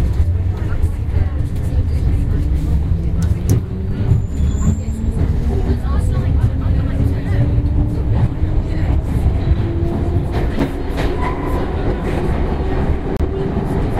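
At 10.59 s and from 13.17 to 13.20 s, blocks of digital silence drop out, 6 ms as a tick, 30 ms as a short hole, with hard edges rather than any fade.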